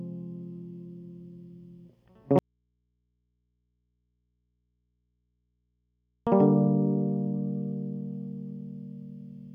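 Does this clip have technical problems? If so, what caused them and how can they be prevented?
Yes. An audio dropout to a faint residue runs from 2.39 to 6.27 s. The music cuts out abruptly for 3.9 s, leaving only faint mains hum, likely from a signal connection breaking while the input stayed live. Secure connectors and monitor the feed while recording.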